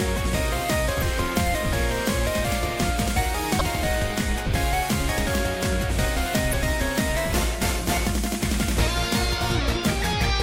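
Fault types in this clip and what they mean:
Damaged data in a compressed stream: corrupt bytes make the decoder lose frame sync. Short glitches, each about 40 ms, sound at 0.98, 3.57 and 6.49 s.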